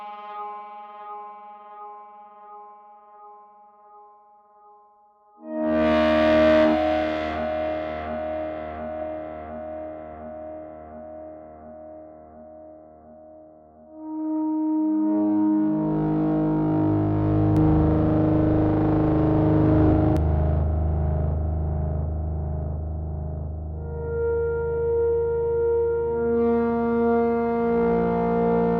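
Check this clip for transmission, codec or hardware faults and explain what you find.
One fault stands out: a doubled audio track from 17.57 to 20.17 s. A second, equally loud, dry copy trails about 0.3 s behind and cuts in and out abruptly, likely from two out-of-step copies mixed together.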